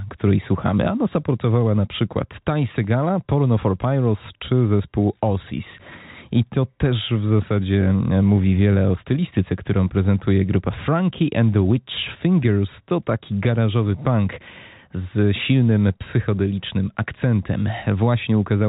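Nothing's actually wrong with this bit of speech; it came over a call line with nothing above 4 kHz, which fits a G.711 mu-law codec at 64 kbps.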